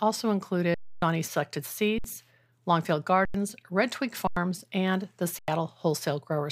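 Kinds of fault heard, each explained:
Underrun with held sample: the buffer ran dry five times, the waveform flatlining 60 to 280 ms, an empty spectrogram gap.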